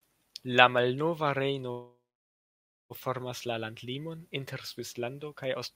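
From 1.71 to 2.92 s the speech stops and the last sound trails off as a fading buzz, then about 0.93 s of silence before it resumes exactly where it paused. This call audio freeze likely comes from delayed packets draining the jitter buffer, inserting roughly 1.2 s without losing speech.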